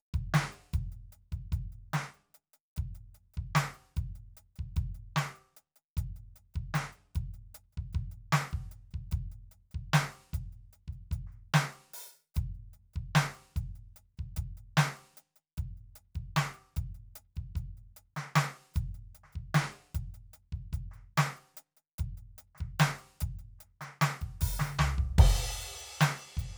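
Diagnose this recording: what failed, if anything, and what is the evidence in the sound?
Nothing failed; this music shows no audible fault.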